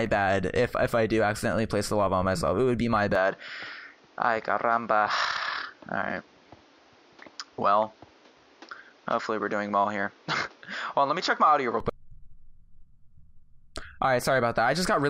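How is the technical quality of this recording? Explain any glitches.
The recording has one clear fault. From 3.15 s to 11.80 s the sound turns duller and narrower, then opens up again. Nothing above 7 kHz comes through in that stretch. A faint new background noise sits well below the signal. The level stays about the same, and there is no gap at either change. This is likely an input switched to a poorer device, a second capture path with a narrower band and its own noise.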